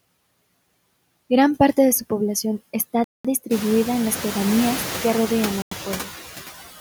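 Throughout the speech, the background sinks between phrases and swells under them; noise suppressor artifacts from a processor cutting the steady noise by about 17 dB. At 3.04 s, after "de su población está", the sound drops to silence for 0.20 s, then resumes with "distribuida en las pedanías", and again at 5.62 s, after "las pedanías que rodean", for 0.09 s. These are likely Bluetooth stalls, where delayed packets let the headphones' buffer run dry until resent audio arrived. The room noise, which rises by about 17 dB around three and a half seconds, is part of the recording.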